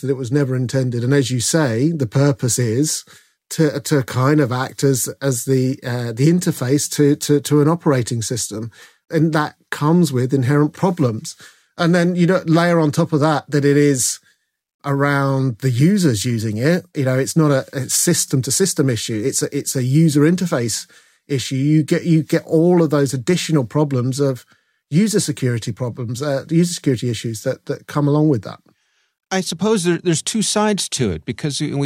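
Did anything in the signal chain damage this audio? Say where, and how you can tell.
No, nothing in the signal chain damaged this speech audio, and no stage left any audible trace.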